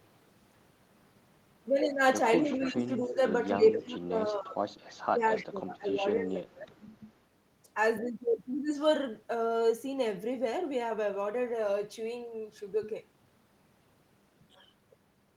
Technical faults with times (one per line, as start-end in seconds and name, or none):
2.43-3.20 speech suppressed in double talk
2.57-2.71 echo leak
3.56-4.62 speech suppressed in double talk
4.87-4.92 echo leak
5.14-6.84 speech suppressed in double talk
5.39-5.46 echo leak